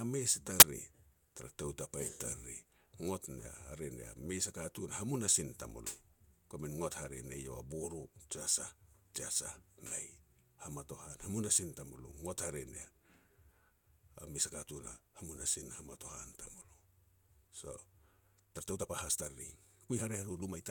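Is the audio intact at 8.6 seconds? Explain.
Yes, the speech at 8.6 seconds is intact, with no fault audible at that moment.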